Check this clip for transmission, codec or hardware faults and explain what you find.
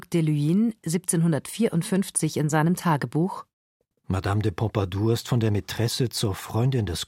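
No faults turned up when I checked this clip.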